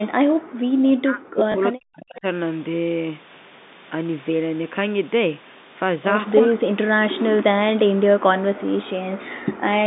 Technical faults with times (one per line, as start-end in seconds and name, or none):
0.00-0.60 background gated by the echo canceller
0.88-2.25 speech suppressed in double talk
1.52-1.54 packet loss with last packet repeated
2.16-2.20 echo leak
6.46-8.63 speech suppressed in double talk
9.08-9.86 speech suppressed in double talk